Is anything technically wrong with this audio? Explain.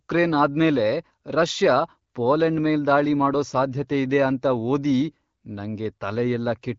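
No, nothing is technically wrong: the speech carries the band-limited character of AMR wideband (HD Voice) coding at 12.65 kbit/s, with the codec working as intended and only a light codec coloration.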